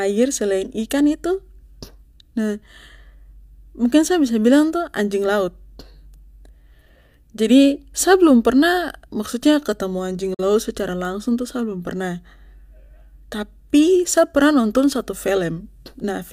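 The receiver briefly lost good frames, producing a digital broadcast dropout from 10.34 to 10.43 s: the speech fades out over about 8 ms into a short silent hole, which fits a single lost frame, and resumes with that stretch of programme gone.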